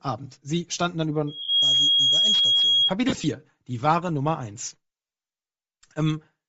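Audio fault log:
throughout: Bluetooth LC3 compression. The speech carries a plainly audible breathy, grainy edge, with the upper spectrum thinned and replaced by noise. This is likely LC3 coding at a low bitrate. The sound points to around 32 kbps in short 7.5 ms frames. At that rate the transform codec drops much of the high-frequency detail and fills the gaps with shaped noise, so sibilants and upper harmonics sound hissy rather than crisp.
1.27 to 2.94 s: loudspeaker feedback squeal. Right after "standen dann" a single tone near 3.3 kHz rises over roughly a third of a second and then holds about 5 dB above the speech until 2.94 s. The microphone is picking up the loudspeaker it feeds. At that frequency the loop gain exceeds one, so the tone keeps reinforcing itself into a steady, piercing whistle.
1.42 to 1.49 s, 3.09 to 3.24 s, 5.07 to 5.10 s: lost LE Audio frames. The first gap lasts 60 ms and sits inside the squeal. 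The second covers 75 ms of missing audio scattered across 150 ms in short runs, ending just before "die wahre". The third lasts 30 ms. In each gap the decoder repeats the last spectrum with randomised phase, so the sound smears into brief noisy, blurred patches.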